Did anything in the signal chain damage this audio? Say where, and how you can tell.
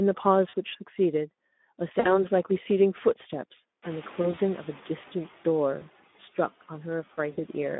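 Yes. Codec stage: Speex coding throughout sounds hoarse and noisy. The band sits between 200 Hz and 3.6 kHz. The texture fits roughly 11 kbps.

Network stage: VoIP packet loss concealed by the speech codec. Stretched-out, fading sounds occur at 0.49, 1.99 to 2.26, 4.21 to 4.39, 5.79 to 5.82 and 7.31 to 7.41 s.

Call processing: the noise suppressor is catching up. The room noise jumps near 4 s. From 3.82 to 5.27 s it passes through, then sinks about 5 dB.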